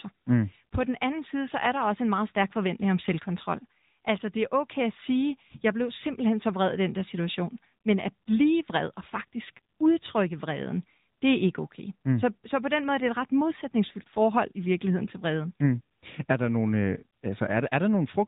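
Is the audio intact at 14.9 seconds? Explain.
No. At 14.9 s, as throughout, the speech carries AMR narrowband mobile codec damage. Nothing passes above 3.8 kHz, and its pulse-driven vocal-tract model sounds buzzy and synthetic, which fits a mid rate near 10 kbps.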